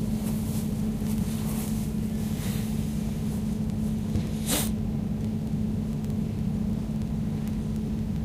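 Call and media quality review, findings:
Word clock ticks, 0.15 to 8.22 s. Sharp ticks roughly every 50 ms. Digital input receiver unlocked from sender clock, around 400 ppm apart; single-sample slips.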